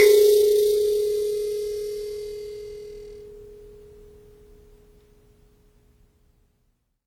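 Throughout the music, a plainly audible coding artefact covers the whole track. Attacks ring, sustained passages sound washy, and a hiss rises and falls with the signal level. The likely cause is WMA compression. Its long transform blocks smear quantisation noise across tens of milliseconds, and quiet spectral lines are dropped entirely. The damage fits an early WMA encoder running at around 48 kbps, though content still extends up to about 20.1 kHz.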